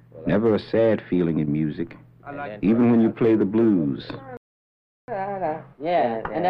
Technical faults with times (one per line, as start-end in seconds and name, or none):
4.37-5.08 playback stall
5.08-6.50 catch-up at higher speed